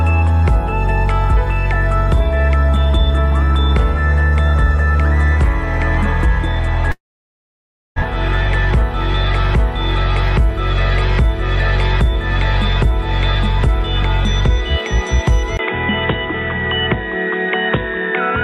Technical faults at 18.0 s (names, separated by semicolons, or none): input switched to a poorer device